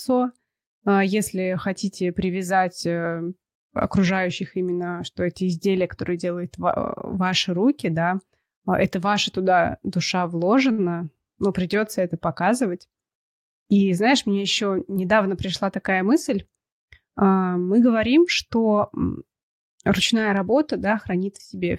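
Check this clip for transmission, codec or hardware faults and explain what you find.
Two jitter-buffer faults turn up, both from packets arriving unevenly over the network.

From 10.71 to 10.80 s there's a short stall from a late packet. A packet missed its slot, the buffer ran dry, and the receiver stretched the last bit of speech by 68 ms until it arrived. Nothing's lost, but that sound hangs on slightly too long with a faint buzzy dip.

Then from 13.68 to 14.71 s you get a jitter buffer speed-up. Too much audio had piled up, so the receiver trimmed tiny pitch-period chunks repeatedly, around 70 ms in total. Speech runs at about 107% speed with unchanged pitch and sounds a little rushed.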